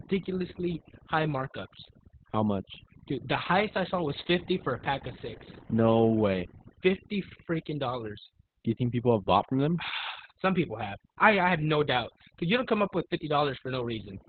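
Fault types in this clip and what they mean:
Overdone noise removal: a noise reducer pushed too hard cuts frequency bands that sit near its noise estimate, taking quiet parts of the speech too. The background breaks into twinkling, warbling specks; a spectrogram shows scattered isolated bins between blanked gaps, and the voice can turn watery or thin.
Opus voice compression: at a bitrate pointing to about 8 kbps, the codec runs its SILK linear-prediction mode in narrowband with 20 ms frames, coding the excitation coarsely. The speech comes out muffled, hoarse and somewhat robotic, and a spectrogram shows nothing above 4.5 kHz.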